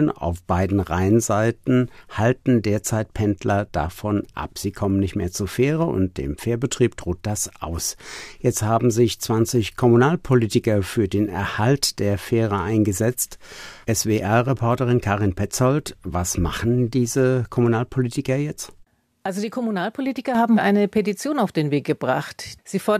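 No technical faults can be heard anywhere in this speech.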